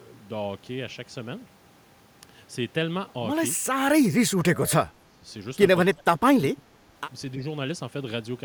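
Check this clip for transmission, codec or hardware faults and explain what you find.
One fault shows up, three times: speech suppressed in double talk. From 4.03 to 5.27 s, 5.94 to 6.25 s and 6.42 to 6.84 s the speech sinks by up to about 20 to 25 dB, likely an echo canceller ducking the near talker while the far side also spoke.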